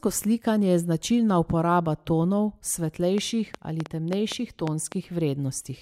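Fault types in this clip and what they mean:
Train of clicks: a run of short, similar-shaped pulses ticks over the speech from 3.18 to 4.93 s, about seven in all at roughly 4 per second, spaced unevenly rather than on a fixed beat. The clicks stand about 10 dB above the speech level. Repeated pulses of matching shape at an uneven pace like this likely come from electrical interference from nearby equipment or a faulty connection or power supply.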